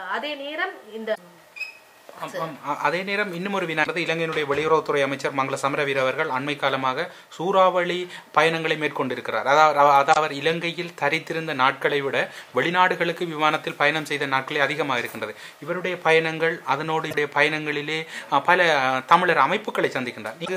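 Damaged data in a compressed stream breaks the decoding five times: at 1.11 to 1.18 s, 3.80 to 3.87 s, 10.10 to 10.17 s, 17.07 to 17.14 s and 20.42 to 20.48 s. In each spot part of the compressed data is wrong, so the decoder misreads or rejects those frames, loses sync and hunts for the next valid frame header. Each event lasts about 70 ms and is heard as a brief chirp, squawk, click or gap in the sound.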